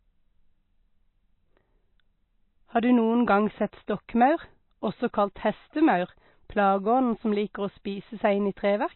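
Throughout the speech, the likely cause is heavy MP3 compression starved of bits, which fits a bitrate near 24 kbps. The encoder has cut everything above 4 kHz, leaving the sound dull, and weak frequency lines flickering out give a plainly audible watery, swirly texture.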